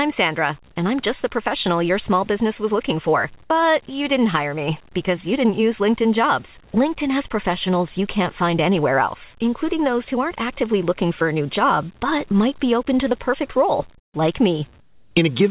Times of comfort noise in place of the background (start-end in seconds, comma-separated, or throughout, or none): 13.98-14.14, 14.80-15.16